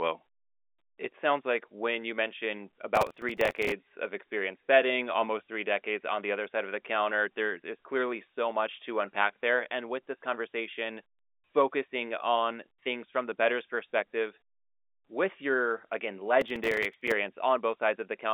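Processor overload crackle breaks into the speech at 2.96 to 3.72 s and again at 16.41 to 17.12 s. Dozens of buffers only a few milliseconds long miss their deadlines, each refilled with stale audio, so a gritty tearing rides over the telephone-band speech.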